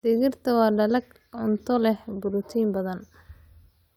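No technical faults can be heard anywhere in this speech recording.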